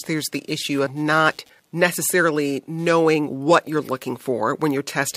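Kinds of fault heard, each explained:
Computer activity noise: There's a faint buzzy chatter running under the whole clip, pulsing at roughly 150 times a second and sitting about 40 dB below the speech. It's the classic sign of the computer's own workload, from processor, graphics or mouse activity, pushing current through the ground the audio circuit shares, so the interference rides on the machine's activity rather than following anything in the speech itself.
Compressed frames skipped: At about 0.85 s, between "there's the issue" and "not necessarily knowing what", the speech jumps ahead by something like 20 ms. That's a chunk of the compressed stream that never got played, either because it was missing or because the decoder threw it out as damaged. The gap points to a single frame of around 24 ms.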